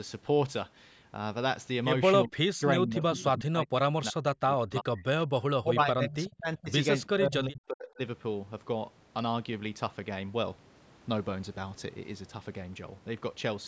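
Speech suppressed in double talk, likely from an echo canceller mistaking the talker for loudspeaker echo, hits 2.27–2.63, 2.79–3.2, 3.36–5.04, 5.62–6.7 and 7.12–8.0 s. The speech dips by up to about 40 dB and drops out in pieces.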